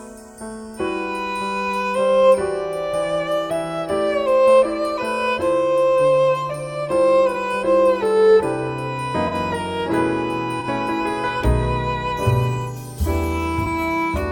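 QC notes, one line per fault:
7.32–7.36 s, 9.27–9.34 s, 10.60–10.66 s, 13.64–13.68 s: corrupt frame concealed. Each spans about 35 to 65 ms, which fits one or two damaged AAC frames. The decoder caught the bad bits and filled each gap itself.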